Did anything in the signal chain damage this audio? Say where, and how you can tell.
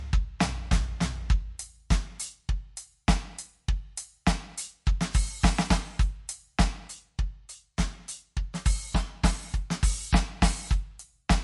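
Yes. Across the whole music clip the top end stops dead at about 11.3 kHz, and the plainly audible damage is a watery, swirling texture and softened attacks. The stage is the codec, most likely MP3 compression at a low bitrate. Short of bits, the encoder cut everything above that fixed frequency and dropped quiet spectral lines, which flicker in and out from frame to frame and produce the swirl.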